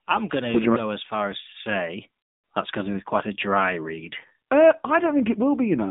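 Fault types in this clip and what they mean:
AMR narrowband mobile codec, throughout: the speech is confined to a 150 Hz to 3.7 kHz band and rebuilt from a vocal-tract model driven by sparse pulses in 20 ms frames, giving a plainly buzzy, synthetic edge that points to a low rate near 7.4 kbps.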